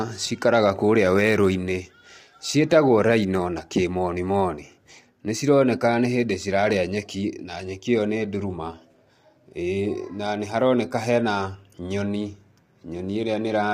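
Throughout the speech, the voice sounds rough and grainy, with a noisy haze filling the gaps between harmonics. This is likely low-delay AAC compression: its short frames resolve pitch harmonics poorly, and the plainly audible damage fits a bitrate around 32 kbps.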